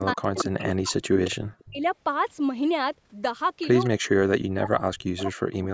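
From 0.0 to 1.45 s, 1.61 to 1.83 s and 3.89 to 5.74 s, the speech dips by up to around 40 dB, likely speech suppressed in double talk. It ducks only while both sides talk, unlike a plain dropout. At 0.13 to 0.6 s, 1.59 to 1.63 s, 3.84 to 3.89 s and 5.17 to 5.25 s, a likely echo leak returns a copy delayed a fixed 224 ms. That regular gap sets it apart from room reverberation. The copy is strongest near 0.13 s at about 5 dB below the speech, and elsewhere it falls to 15 to 40 dB below.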